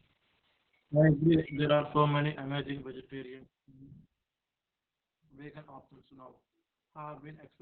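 A speech clip carrying Opus voice compression throughout: the SILK coder has run narrowband, leaving nothing above about 4.6 kHz, and its coarse excitation coding makes the voice muffled, hoarse and faintly robotic. The heavy damage points to a very low bitrate, around 6 kbps.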